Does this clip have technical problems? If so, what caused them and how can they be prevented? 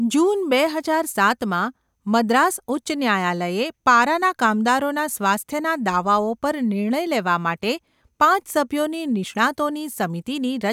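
No, no technical faults can be heard anywhere in this speech recording. There is nothing here that calls for a fix or for prevention.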